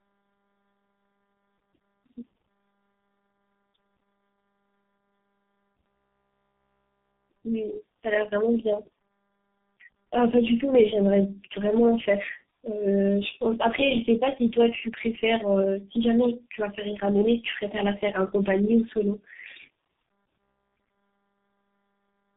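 Speech, with tandem speech coding throughout. The voice sounds rough, muffled and warbly, with nothing above 3.8 kHz. That points to three speech codecs in a row, ending with a low-rate one like G.723.1. Each recoded the last one's already damaged output.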